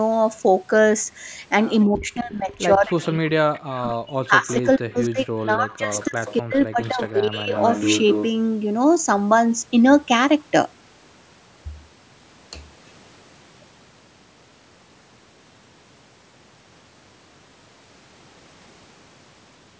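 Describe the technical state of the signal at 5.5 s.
At 5.5 s the speech sits inside a stretch, from 1.86 to 7.55 s, where it sinks, thins and drops out in pieces, at its deepest by about 40 dB, with around four seconds affected in all. This is speech suppressed in double talk: with both ends talking at once, the echo canceller likely could not tell this talker apart from the loudspeaker echo and turned everything down together.

Just before that moment, from 5.39 to 5.47 s, a brief, faint scrap of the voice returns 260 ms late, sitting about 35 dB below the direct speech. This is echo leak: one side is likely playing the call over a loudspeaker, and its canceller let part of what its microphone picked up pass back down the line as a delayed copy.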